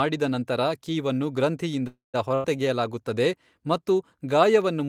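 A speech clip with two interruptions close together. From 1.87 to 2.16 s there is a call audio freeze: the last sound is stretched and fades, dropping to silence for its final 150 ms, then speech resumes exactly where it stopped, likely because packets were delayed and the jitter buffer ran dry, adding about 263 ms of delay. Shortly after, from 2.34 to 2.46 s, a burst of packet loss gives a shorter 95 ms held, fading fill, but here speech picks up about 100 ms further on. That skipped stretch is what separates it from the freeze, which loses nothing.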